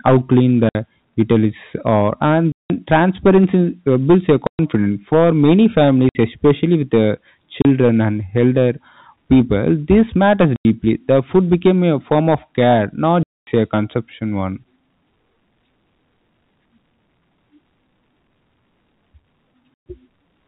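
It's a speech clip running at telephone bandwidth, so there's nothing above 4 kHz, and it has two distinct problems. The first is hard clipping that runs the whole way through. The level is driven roughly 10 dB past what the chain can carry, so the loudest peaks get sliced flat. Only a couple of percent of samples actually hit the ceiling, but those flat tops throw off high harmonics, and you hear them as a crackle on the peaks. The second is packet loss filled with silence: the receiver simply played nothing where audio went missing, so there are hard-edged holes. They land at 0.69 s (60 ms), 2.52 s (180 ms), 4.47 s (120 ms), 6.09 s right after "for many" (60 ms), 7.62 s just after "especially with the" (30 ms), 10.56 s right before "the food became a" (90 ms), 13.23 s (240 ms, the longest), and 19.74 s. Every length is a multiple of 30 ms, which points to 30 ms packets being dropped singly or in runs.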